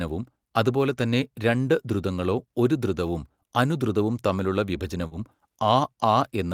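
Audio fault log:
5.07–5.13 s, short concealed packet loss: right after "ഒരു ധൃതവും അനുധ്രുതവും തമ്മിലുള്ള", about 40 ms of the call arrived too late, so the receiver patched the gap by extending the preceding sound before blending back. You get a quick smear there, and any brief consonant in that spot may simply drop out.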